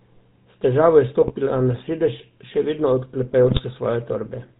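The whole clip carries GSM full-rate codec damage, plainly audible. The speech has a buzzy, gravelly roughness. Nothing is heard above 4 kHz. The coder rebuilds the voice from a vocal-tract filter driven by sparse, regularly spaced pulses. This fits a 13 kbps GSM full-rate stream.

GSM bit errors break through twice, from 1.21 to 1.32 s and from 3.44 to 3.61 s. Corrupted filter, pitch or gain values reach the decoder. The spectrum warps and the level jumps over a few frames. Each burst sounds like a short squawking, popping gargle.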